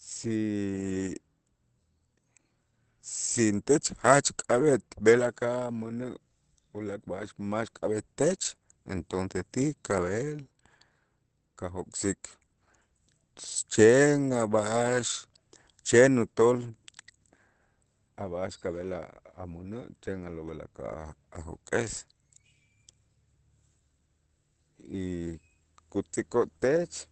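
Throughout the speech the sound is muffled and hoarse, with nothing above about 8.4 kHz and plainly audible coding damage. This likely comes from Opus compression running its SILK speech mode at wideband, which fits a bitrate around 16 kbps.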